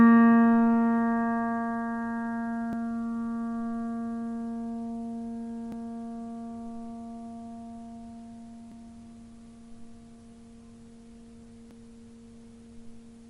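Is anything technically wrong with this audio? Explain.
Yes. Audio missing between chunks, at 2.73, 5.72, 8.72 and 11.71 s: tiny skips of a few milliseconds recur about every 3 seconds. The sound jumps forward with no gap, likely because the recorder works in 3-second chunks and drops a sliver at each handover.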